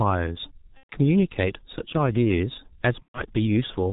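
From start to finish the speech carries the sound of the G.723.1 codec, heavily damaged, which fits its 6.3 kbit/s mode. Nothing above 4 kHz survives. The slow voice model and 30 ms frames leave it muffled and hoarse, with smeared consonants.

From 0.77 to 0.93 s, VoIP packet loss concealed by the speech codec takes over. About 120 ms of audio, roughly four frames, is missing. The decoder repeats its last pitch and filter at falling gain, so the sound turns into a fading buzzy tone or coloured noise. The same happens from 3.03 to 3.24 s. Each time the voice stays weak briefly afterwards.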